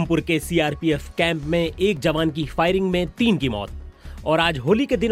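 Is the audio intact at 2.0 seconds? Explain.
No. At 1.97 s, just before that point, a block of digital silence replaces about 2.7 ms of samples with zeros, which fits a 128-sample buffer. The abrupt cut and return is heard as a single tick.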